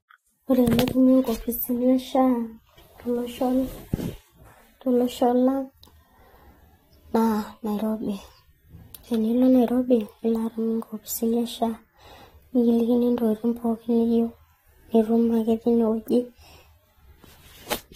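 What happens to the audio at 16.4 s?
At 16.4 s you're hearing the same thing that runs through the whole clip: nothing above 16.6 kHz, with two kinds of codec artefacts layered together. That's likely transcoding between lossy codecs. The character fits an AAC-style encode at around 48 kbit/s re-encoded to Vorbis at around 43 kbit/s. The second encoder spends its bits on the first one's damage and adds its own, and the speech keeps the lower ceiling.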